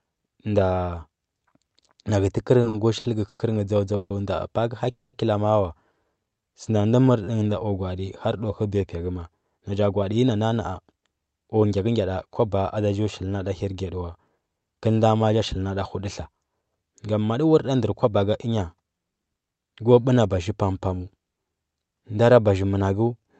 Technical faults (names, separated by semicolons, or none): repeated stalls (stutter); call audio freeze; jitter buffer slow-down; jitter buffer speed-up